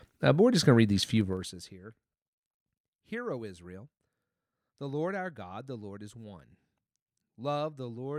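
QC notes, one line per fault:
1.15–1.75 s, zipper noise: Just after "going to read these", the level drops by roughly 25 dB in 2 dB steps with no smoothing, about 30 steps a second. Each jump leaves a small click, so a fast ticking zip rides on the speech while the level falls.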